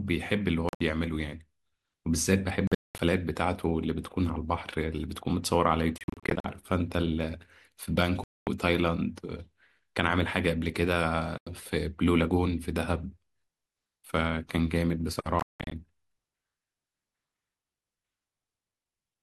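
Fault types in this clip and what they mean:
Bluetooth dropout: the speech falls silent six times between about 0.69 and 15.7 s, each hole cut abruptly or faded over a few milliseconds, and the likely cause is wireless packets arriving too late to play. The lost audio runs from about 90 to 260 ms per event. Some gaps are one solid silence, while others break into several short holes. Unlike an edit, nothing is spliced together. The speech resumes further along, as though it had played on through the silence.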